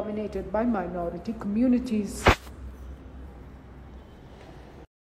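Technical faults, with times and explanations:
0.35 to 2.41 s, drift correction step: for about two seconds the whole sound drops in speed by roughly 6.4 percent and sags in pitch by about 114 cents, a touch over a semitone, then comes back to normal at 2.41 s. Speed and pitch move together, which is the giveaway that the playback rate itself was nudged. That's likely clock-matching software taking one abrupt step to refill its buffer rather than easing the rate over gradually.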